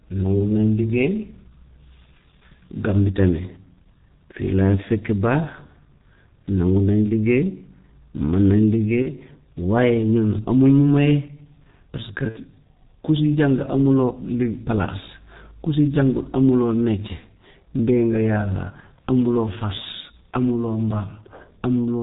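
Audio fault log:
throughout: G.723.1 codec. The speech is band-limited with nothing above 4 kHz, so it sounds muffled, and the coarse, slowly updated vocal-tract model gives a hoarse, rough texture with smeared consonants. The damage is heavy, which fits the 6.3 kbit/s mode working on 30 ms frames. At that rate, fast spectral changes between sounds cannot be followed, so transitions blur and sibilants lose definition.
9.02–9.10 s, 12.29–12.38 s, 18.80–18.84 s: VoIP packet loss concealed by the speech codec. At each gap the decoder keeps synthesising from its last pitch and filter state while ramping the gain down, so the missing stretch comes out as a brief buzzy or tinted drawn-out sound rather than silence. The first and last gaps fit one lost 30 ms frame and the middle one two frames (60 ms). Because the decoder state must rebuild, the audio stays weak or distorted for a short time after each gap.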